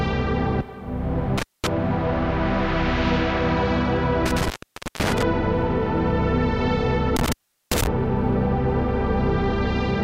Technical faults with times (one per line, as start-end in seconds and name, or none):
1.38-1.67 intermittent contact
4.26-5.23 intermittent contact
7.16-7.87 intermittent contact